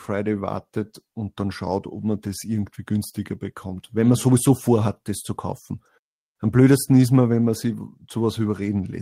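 No technical faults are audible.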